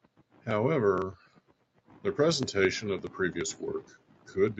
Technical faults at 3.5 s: none

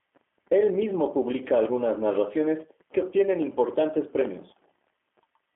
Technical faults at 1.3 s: G.729 codec

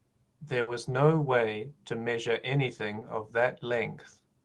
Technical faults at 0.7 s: burst of packet loss

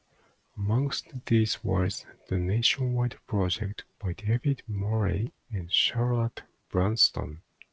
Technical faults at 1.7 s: clock drift between sender and receiver; repeated timing corrections

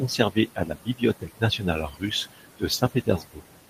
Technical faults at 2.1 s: noise suppressor artifacts; speech cut by the noise suppressor

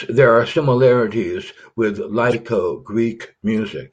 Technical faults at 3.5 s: corrupt frame decoded

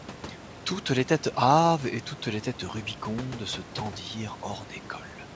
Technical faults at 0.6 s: none

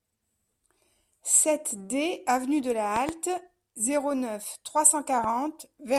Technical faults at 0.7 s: none

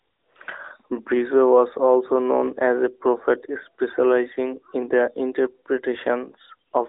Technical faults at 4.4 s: none

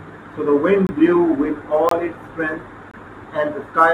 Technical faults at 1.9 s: gap between chunks

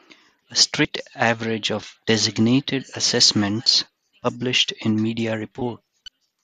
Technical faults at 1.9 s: none

